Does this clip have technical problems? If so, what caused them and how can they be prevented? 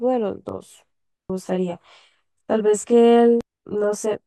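Yes. From 0.49 s to the end, the speech sounds rough and slightly doubled from channel delay (comb filtering). One channel runs around 20 ms late. Summed to mono, shared content cancels at evenly spaced frequencies, starting near 20 Hz. Align the channels before any mono fold-down.

There are two brief glitches from damaged data in a compressed stream, at 1.30 to 1.33 s and 3.41 to 3.44 s. Corrupted bytes made the decoder misread frames and lose sync until it found the next header. Use error-checked transfer and verify file integrity.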